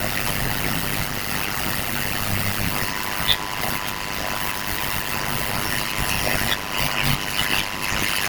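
From the start, the speech carries overlap-add ripple: frames were windowed and summed with an overlap that fails to reach constant gain, so the level swings by about 60 dB once per frame, around 100 times a second. It sounds like a harsh, robotic flutter.

At 2.71 s a USB whine enters and holds to the end. It is a steady 1 kHz tone, strongest at that frequency, sitting roughly 10 dB below the speech. This points to the bus's 1 ms framing current leaking through power or ground.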